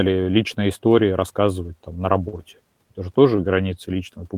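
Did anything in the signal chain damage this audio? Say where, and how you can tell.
Yes. A lost packet rebuilt from error correction appears at 2.35 to 2.37 s, a damaged stretch about 20 ms long that points to a single packet dropped on the network. There is no gap. The packet after it carried a low-bitrate backup copy of that frame, which is how Opus in-band forward error correction works, and the decoder played that copy instead. That is why the speech keeps going but turns briefly rougher and noisier before clean frames resume.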